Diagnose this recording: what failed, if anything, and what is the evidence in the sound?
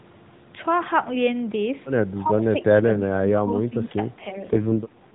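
Call processing: the speech dips in level four times, briefly at 2.23–2.3 s and 2.82–2.89 s, then for longer stretches at 3.11–3.5 s and 3.68–4.0 s, losing roughly 10 to 15 dB at its deepest. The likely cause is speech suppressed in double talk, with the echo canceller ducking the near talker while the far side spoke. Unlike packet loss, there is no repeated frame. The sound is turned down and then recovers, and unlike gain control the dips follow no slow breathing pattern.

Codec: from 4.2 s to 5.14 s the speech turns buzzier and more synthetic. This is an AMR rate drop from 12.2 kbps to 4.75 kbps, where the encoder has fewer bits for the pulses that drive its vocal-tract model. The AMR narrowband path keeps the same sub-4 kHz band before and after the switch, and nothing goes silent. That separates it from a bandwidth cut or dropped frames. Only the texture coarsens.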